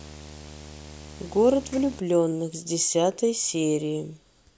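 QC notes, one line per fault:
0.00–2.00 s, video or display buzz: a screen or video cable coupling into the speech puts a 75 Hz buzz, tracking the display's field rate, under the audio with a layer of hash riding above it, sitting roughly 20 dB below the signal until it stops at 2.00 s.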